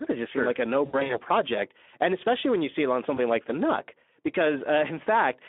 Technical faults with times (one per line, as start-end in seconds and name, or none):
0.00-5.49 Speex codec
0.85-1.20 VoIP packet loss concealed by the speech codec
3.15-3.19 VoIP packet loss concealed by the speech codec